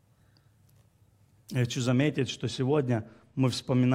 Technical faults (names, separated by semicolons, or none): de-emphasis applied wrongly